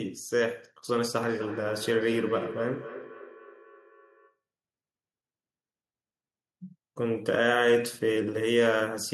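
From 1.2 to 4.39 s there is feedback echo between two devices. A second device on the call replays this speech into a microphone that sends it back. Each word returns roughly every third of a second, thinner and ringing, peaking about 12 dB below the speech.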